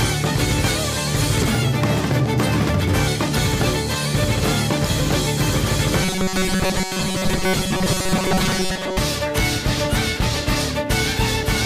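From 6.02 to 8.98 s the sound turns rigid and metallic, with a steady buzz at 188 Hz that stays fixed while the rest of the audio moves loosely around it. This is robotic sound from repeated short buffers. The likely cause is audio arriving too slowly, so the playback repeats a snippet of about 5.3 ms, the length that sets that 188 Hz pitch. These repeats fill most of the stretch, so much of the real material is skipped.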